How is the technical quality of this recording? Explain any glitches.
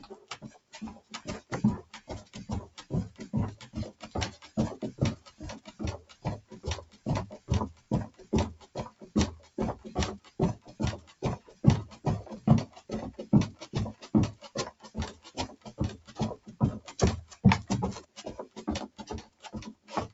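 The quality is compromised by a speech noise suppressor that stayed active on non-speech sounds and repeatedly pulled them down.

Noise suppressor applied to music or sounds: Throughout the clip, processing built for speech treats steady tones, ambience and decaying tails as background noise. It keeps reassessing the signal, so the gain applied swings by something like 20 dB. Sharp onsets mostly pass, but sustained material sinks, and the result pumps and flutters with a thinned body.

Sound cut by the noise suppressor: The suppressor clamped down on sounds it judged to be noise at 0.18–2.84 s, 3.63–4.57 s, 5.17–9.57 s, 10.19–11.98 s, 12.68–12.89 s, 13.6–17.44 s and from 18.03 s to the end. Within each stretch, held or fading sound drops by about 13 dB, and by about 14 dB in the last one. Decays are truncated and the level dips audibly while transients stay intact. The call path keeps nothing above 8 kHz.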